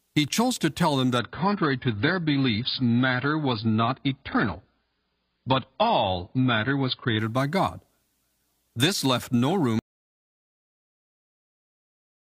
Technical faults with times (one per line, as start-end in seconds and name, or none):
1.19-7.19 adaptive stream at a lower bitrate
9.79-12.20 audio dropout to silence